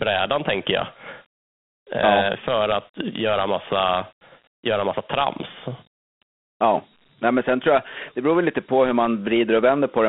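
Throughout, a gritty hiss clings to the speech inside a narrow 200 Hz to 3.5 kHz band. This is Dialogic VOX ADPCM: coarse 4-bit coding that fits a 32 kbps stream.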